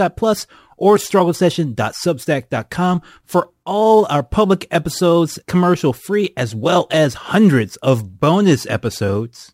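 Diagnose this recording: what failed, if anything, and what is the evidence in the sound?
A crude rate conversion failed at the sample-format conversion stage. A gritty, inharmonic fizz rides on the speech from start to finish, strongest on loud and bright sounds. It sits roughly 30 dB below the speech. The pattern points to a 48 kHz to 44.1 kHz change done by nearest-sample picking without filtering.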